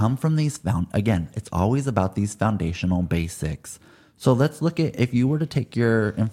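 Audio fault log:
Listening to the speech recording, nothing stood out as a problem at any point.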